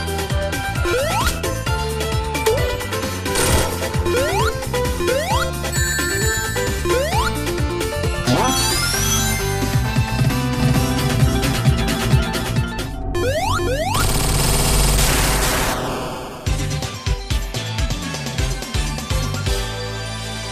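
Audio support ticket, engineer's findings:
MP2 compression, whole clip. Dull, gurgly, grainy top end, upper bands dropping in and out, the rest coarse and crunchy. Likely an MPEG Layer II encode starved for bits, which fits something around 80 kbps. Encoder shuts off high sub-bands to save bits and roughly quantises what's left, hence the flicker and grit. Classic low-rate digital radio sound, plainly audible here.

Doubled audio track, 10.60 to 15.74 s. Second full-band copy trailing by about 400 ms, roughly as loud as the original. No decay or room colour on it, and it cuts in and out abruptly at both ends. Likely a second capture path running late, or an edit leaving two misaligned copies stacked. Worth checking routing and the timeline around there.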